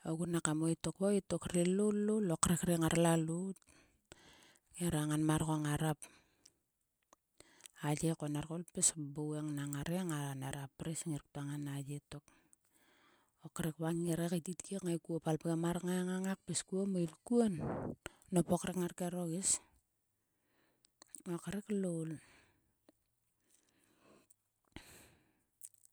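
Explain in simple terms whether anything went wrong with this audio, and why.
Nothing went wrong with this audio, because no fault can be heard anywhere in it.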